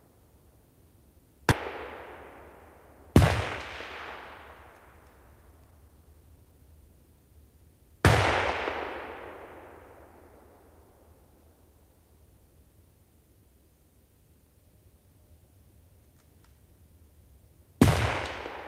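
At 1.51 to 1.53 s the audio does a skip ahead: roughly 0.7 s of sound is thrown away and playback leaps straight to later material, with nothing inserted to cover the join. This happens when audio that was already queued is discarded, such as an overfull jitter buffer flushing itself to catch up. Unlike a dropout, there is no silence or fill at the seam, just an abrupt jump where the sound's continuity breaks.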